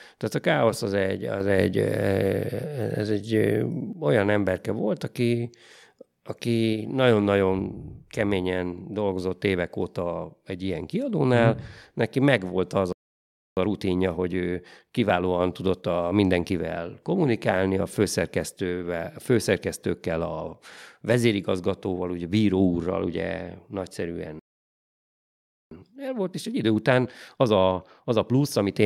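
The clip is speech with two playback stalls. Right after "neki megvolt az", the sound cuts out from 12.93 to 13.57 s (0.64 s), and again from 24.39 to 25.71 s (1.32 s). Each stall was likely caused by the player running out of data or its thread being blocked. On a waveform each shows as a flat line, and on a spectrogram as a fully blank vertical band. After each stall comes time-compressed catch-up, where the player trims its backlog by splicing out short pieces. From 13.57 to 16.57 s, ending at "kommunikálni a főszerkesztővel a", the speech runs about 1.1 times fast. From 25.71 to 28.71 s it runs 1.25 times fast. In both stretches the pitch stays normal. A spectrogram shows harmonics at unchanged heights but syllables packed closer together.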